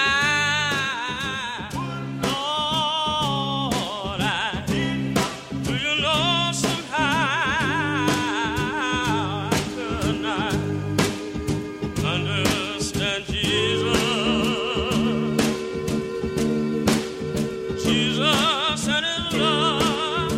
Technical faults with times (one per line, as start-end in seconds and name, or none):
10.36 dropped samples
13.81 dropped samples